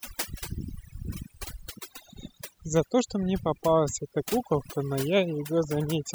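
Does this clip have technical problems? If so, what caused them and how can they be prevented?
Yes. The whole clip shows overdone noise removal: a noise reduction stage was set far too aggressively for a noisy recording, so any frequency band sitting close to its noise estimate was pushed right down or switched off, taking the quieter parts of the speech with it. Between phrases the background drops to near silence with twinkling specks. Prevent it by using gentler reduction settings and reducing noise at the source.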